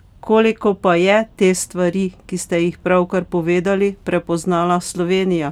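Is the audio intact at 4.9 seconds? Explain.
Yes, at 4.9 seconds the audio is intact, with no dropout, click, distortion or other audible fault.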